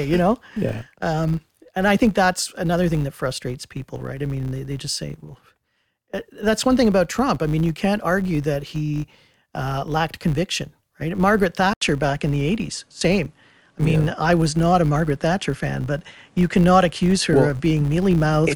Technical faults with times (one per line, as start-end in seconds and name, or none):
0.00-18.56 filter restarted on every block
11.73-18.56 input switched to a poorer device